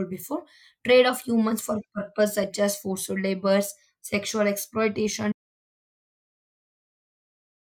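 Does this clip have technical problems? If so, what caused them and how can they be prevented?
Yes: an audio dropout to silence at 5.32 s lasts to the end, likely from a lost input writing silence; the waveform flatlines and the spectrogram goes blank. Secure connections and monitor input levels while recording.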